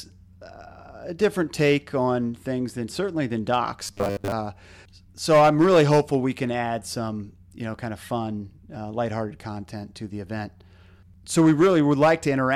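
Hard clipping shows up first between 1.23 and 1.74 s, right after "uh a" and before "on things than certainly". The level runs about 4 dB past what the chain can pass, so the peaks get sliced flat, and the squared-off tops throw harmonics way up the spectrum. You hear it as a gritty crackle riding the loud parts of the speech. There's a short one at 3.53 to 3.58 s, overdriven by about 2 dB.

Then from 3.84 to 4.32 s, just after "things than certainly than", the speech goes robotic: a stiff, metallic buzz locked at 100 Hz that still roughly tracks the talking. The likely cause is repeated short buffers. Audio isn't arriving often enough, so something keeps replaying the last 10 ms chunk while the real material is skipped. Most of that half-second is repeats, and the 10 ms loop length is what pins the pitch at 100 Hz.

The clipping comes back harder from 5.30 to 6.16 s, ending just before "we can add some", and again from 11.38 to 12.12 s. 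Both are overdriven by about 6 dB. A final brief clip at 12.53 s, only about 1 dB over, catches the very end.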